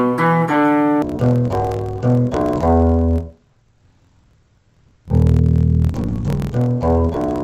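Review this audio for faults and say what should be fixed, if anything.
From 1.02 s to the end, the sound drops an octave and turns doubled and choppy. That's interleaved audio read as planar. Each 24 ms block holds alternating left and right samples, but the first half got read as one channel and the second half as the other. Both halves play at half speed, hence the -12 semitone shift, while the block edges chop it at about 41.7 Hz. To prevent it, check the sample layout flag whenever buffers pass between components.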